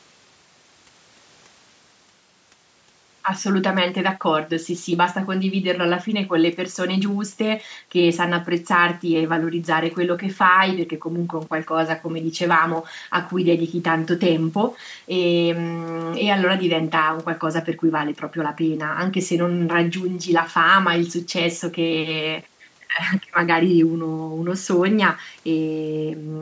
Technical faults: none

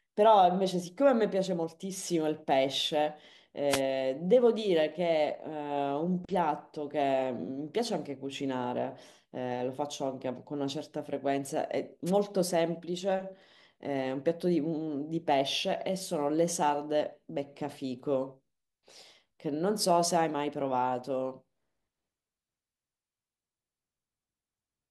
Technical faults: wireless microphone noise hit

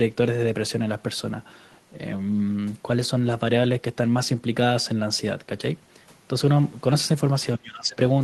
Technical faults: speech suppressed in double talk

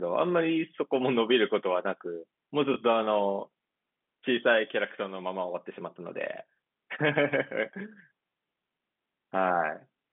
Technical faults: packet loss with last packet repeated

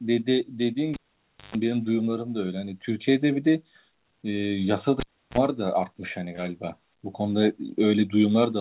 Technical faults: cable pulled and plugged in

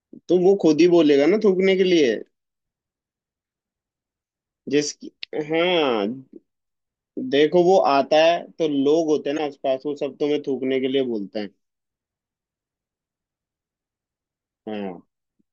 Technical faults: damaged data in a compressed stream

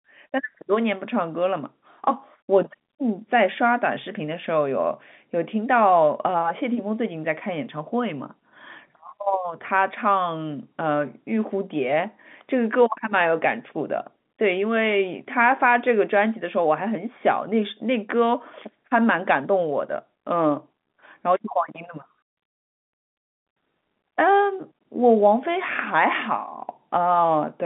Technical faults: none

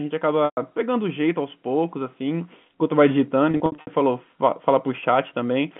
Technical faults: packet loss with pitch repetition

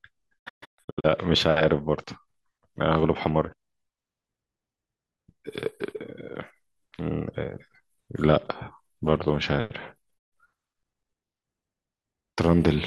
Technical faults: digital broadcast dropout

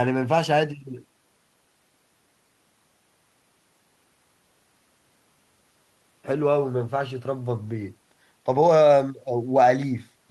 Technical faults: none

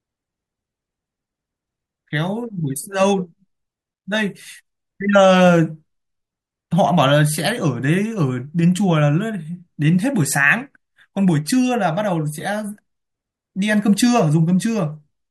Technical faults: none

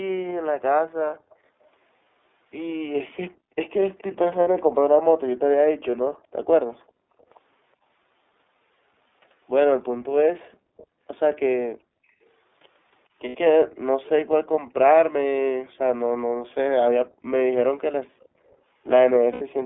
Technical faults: iLBC codec; background gated by the echo canceller; echo leak; lost iLBC frames

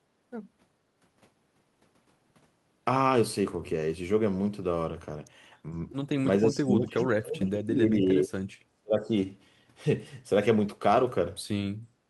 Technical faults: speech suppressed in double talk; background gated by the echo canceller

